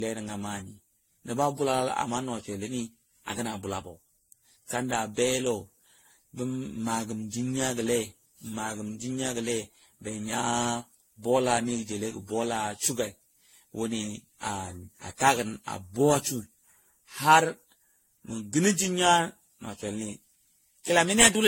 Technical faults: generation loss

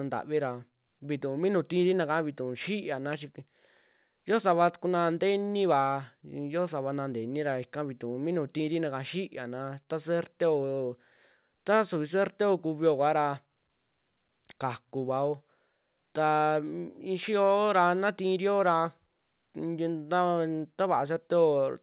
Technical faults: none

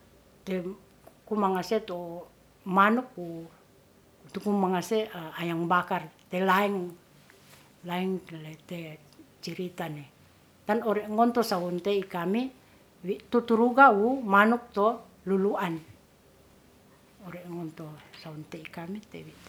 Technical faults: none

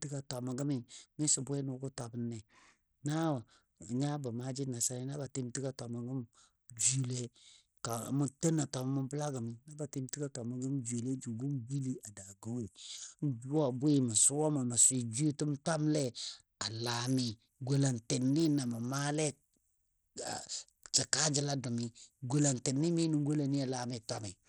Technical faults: Bluetooth SBC compression

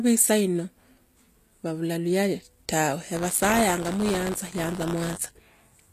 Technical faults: HE-AAC compression; buffer tearing

